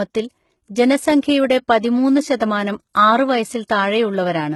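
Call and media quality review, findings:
HE-AAC compression, throughout: heavily gritty, lispy s sounds; likely SBR coding, fitting 16 kbps. Spectrogram: copied, blocky treble above the crossover, blank above 11.8 kHz.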